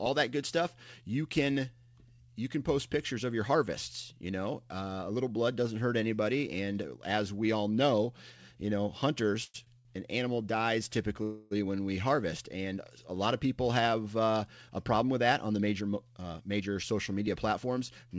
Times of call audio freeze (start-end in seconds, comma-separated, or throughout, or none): 9.44-9.56, 11.23-11.53